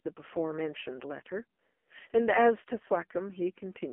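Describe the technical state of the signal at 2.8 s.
At 2.8 s the speech carries AMR narrowband mobile codec damage, present throughout. The band stops at 3.4 kHz and thins below 250 Hz, and the sparse-pulse vocal-tract model leaves a heavily buzzy, synthetic tone, pointing to a rate near 5 kbps.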